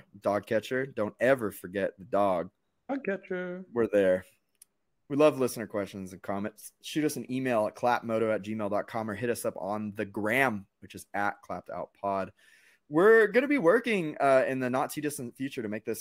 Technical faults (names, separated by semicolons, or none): none